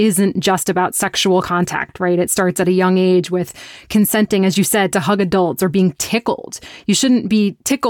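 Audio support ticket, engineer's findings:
Listened through the speech recording and nothing stood out; no issue found to attribute to any component.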